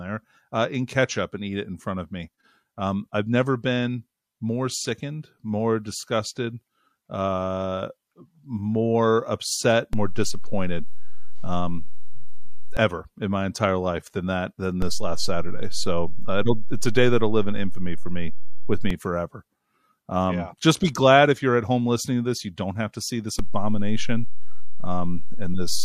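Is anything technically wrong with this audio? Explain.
Yes, there's a DC step problem in this speech clip, three times over. The zero line suddenly jumps from 9.93 to 12.77 s (about -17 dBFS), from 14.82 to 18.90 s (about -15 dBFS), and from 23.39 s through to the end (about -15 dBFS). Each jump puts a sudden offset under the waveform, so you hear a low thump or click at the edges while the speech itself carries on unchanged.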